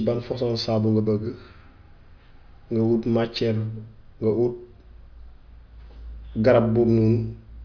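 Nothing in the recording stood out as a technical problem on listening.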